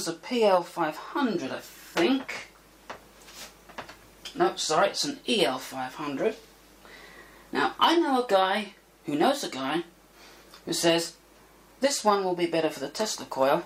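No technical faults can be heard anywhere in the audio.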